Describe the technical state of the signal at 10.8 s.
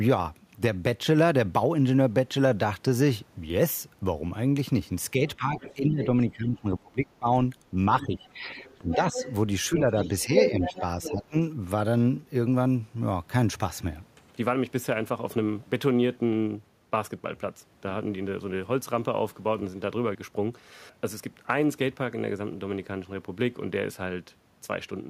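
At 10.8 s the talker's speech is pressed down as the speech suppressed in double talk fault, which runs from 9.69 to 11.35 s. The level sinks by around 10 dB at its deepest, adding up to well under a second of damage. The likely cause is an echo canceller that, faced with both sides talking at once, couldn't separate the near talker from the loudspeaker echo and turned both down. Unlike a network dropout, the dips follow the overlap rather than cutting cleanly to silence.

At the same moment the other side's voice is leaking through, from 10.63 to 11.24 s. A second voice sits about 10 dB under the talker, likely because the far end playing on the loudspeaker is reaching the microphone and isn't fully cancelled. What separates this from ordinary crosstalk or a second person in the room is that it is a residue the echo canceller only partly removed.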